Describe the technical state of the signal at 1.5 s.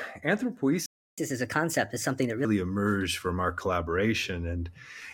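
At 1.5 s the speech is in a catch-up at higher speed, running from 1.18 s to 2.45 s. Having fallen behind after a stall, the player drains its backlog by resampling the buffered audio at 1.25 times normal rate, so timing and pitch shift together. The speech sounds hurried, pitched up by roughly four semitones, until at 2.45 s the rate returns and the pitch drops to normal.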